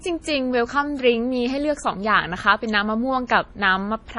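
Speech runs through the whole clip with heavy MP3 compression damage, likely from encoding at a low bitrate, which fits roughly 32 kbps. The treble stops abruptly at about 10.6 kHz, and the remaining sound has a watery, swirling quality as weak frequency components drop in and out between frames, with s sounds chirping metallically and consonant attacks smeared. A plain low-pass filter would dull the top end just as cleanly but leave no swirl or chirping.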